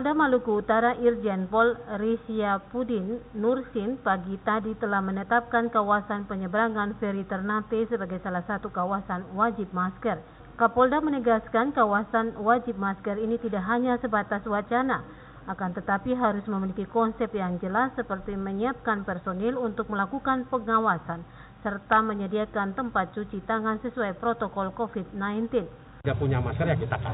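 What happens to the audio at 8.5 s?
Nothing goes wrong at 8.5 s: the audio passes through intact, carrying only the narrow, telephone-like band of the call path, with nothing above 4 kHz.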